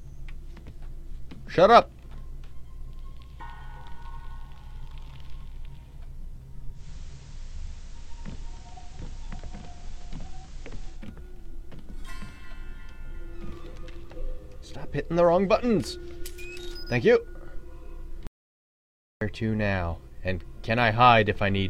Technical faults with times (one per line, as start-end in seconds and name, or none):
6.72-11.05 digital radio blending to analogue
18.27-19.21 audio dropout to silence